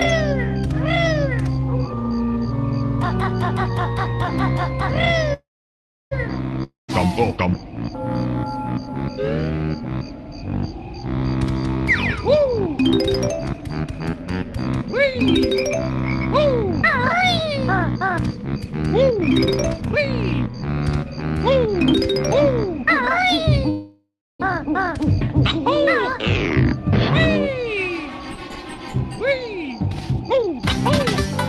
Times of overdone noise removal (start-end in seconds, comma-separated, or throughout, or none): none